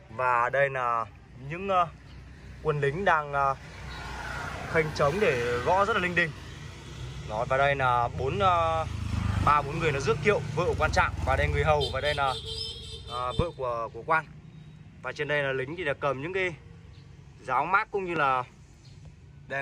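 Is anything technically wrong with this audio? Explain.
Yes. A loud pop occurs at 13.39–13.42 s and again at 18.16–18.19 s, each a single sharp click peaking about 15 dB and about 10 dB above the sound. The likely cause is a brief voltage spike from a switch, static or driver glitch, shaped by later circuitry, while the sound continues underneath.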